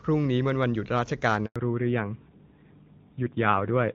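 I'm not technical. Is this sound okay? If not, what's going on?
No. At 1.46 s the speech cuts out for a tenth of a second, a handover gap: the phone switched networks mid-call and nothing arrived during the switch. From 1.56 s on, the clear HD Voice quality of the start turns duller and rougher, with everything above 4 kHz gone. That is a fallback to narrowband, where the call dropped to an older, lower-quality phone codec.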